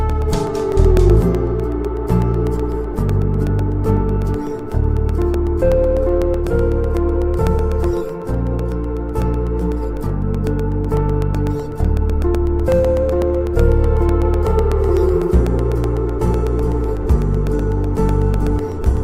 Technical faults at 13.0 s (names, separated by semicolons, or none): periodic USB or driver dropouts